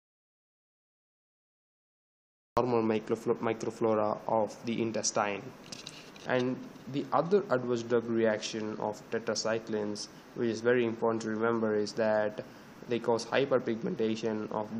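An audio dropout to silence runs from the very start of the clip to 2.57 s: the file opens already in the gap, with silence and no room tone at all, and the sound only arrives at 2.57 s, cutting in mid-flow rather than starting naturally. The likely cause is the input being lost for that stretch, through a disconnected device, failed link or stray mute, while the recorder kept writing silence, so whatever preceded it is gone.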